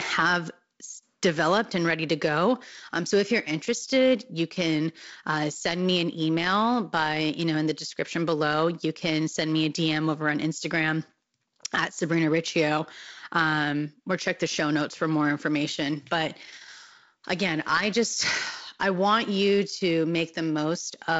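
No technical faults are audible.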